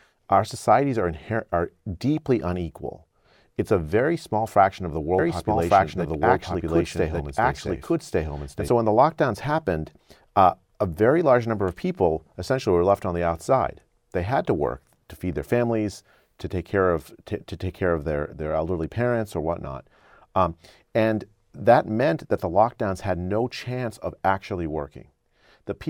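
From 5.19 s to 8.69 s the speech is doubled: a second full-band copy of the same audio runs about a second behind, at roughly the same loudness, so phrases overlap with themselves. It starts and stops abruptly and has no decay or room colour, which sets this doubled audio track apart from echo or reverberation. The likely cause is the signal being captured twice, once through a slower path, or an edit leaving two copies out of step.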